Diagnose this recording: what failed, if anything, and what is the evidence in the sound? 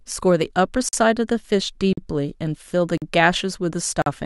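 Gap between chunks at the playback or streaming stage: 44 ms hard-edged silences at 0.89, 1.93, 2.98 and 4.02 s, with exactly 1.0 s of speech between them. Unlike packet-loss dropouts, nothing is missing. The sound resumes where it stopped, so silence was inserted at chunk joins.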